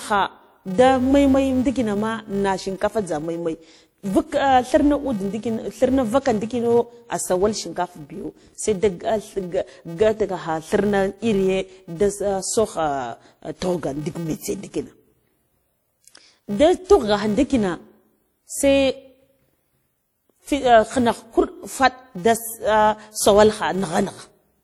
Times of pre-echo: 16.86-16.89

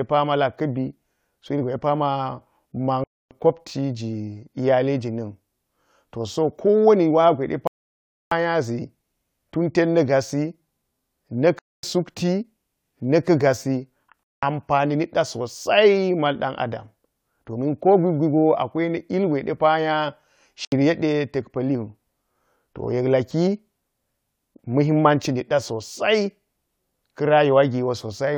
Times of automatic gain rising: none

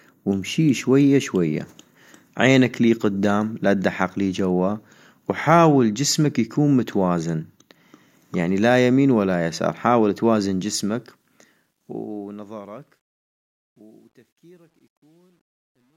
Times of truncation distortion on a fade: 10.49-15.96

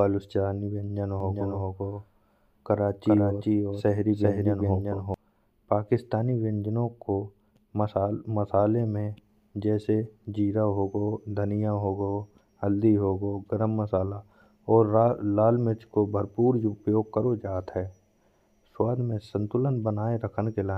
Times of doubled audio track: 1.20-5.14

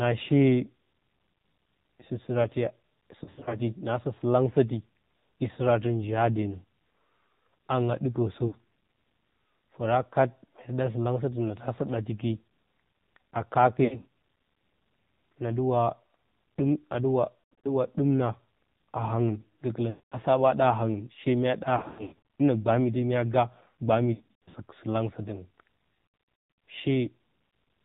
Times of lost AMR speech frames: 3.24-3.58, 8.48-8.55, 13.84-14.06, 17.52-17.67, 19.90-20.17, 21.78-22.41, 24.14-24.55, 26.06-26.62

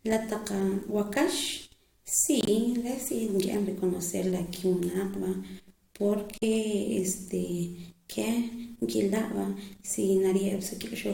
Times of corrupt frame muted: 2.41-2.49, 6.38-6.43

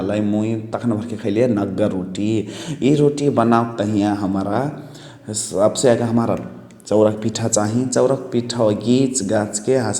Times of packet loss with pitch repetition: none

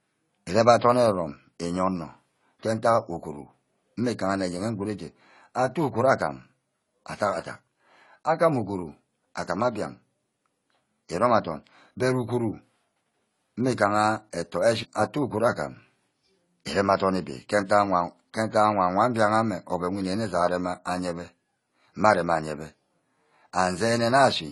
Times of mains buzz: none

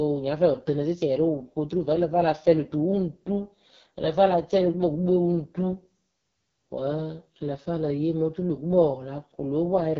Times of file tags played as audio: none

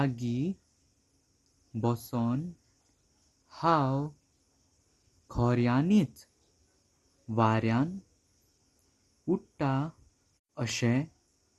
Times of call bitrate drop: none

